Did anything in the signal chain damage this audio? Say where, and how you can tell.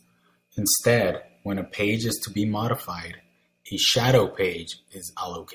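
No, nothing along the chain audibly damages this speech; the signal holds steady throughout, with no break, distortion or disturbance at any point.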